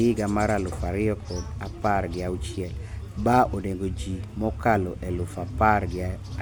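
No audible technical faults.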